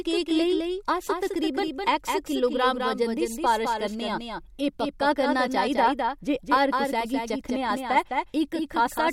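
A second capture path running behind the first, or an edit leaving two copies out of step, has likely put this speech clip into the mix twice, giving a doubled audio track throughout. The later copy trails by about a fifth of a second at roughly 5 dB below the original, full-band and dry, with no decay or room colour. Every syllable is shadowed by a flat, slapback-like repeat.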